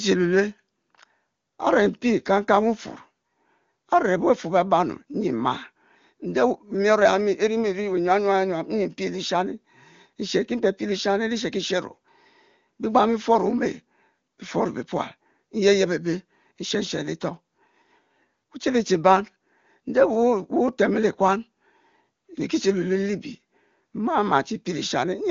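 Nothing stood out on listening to this speech.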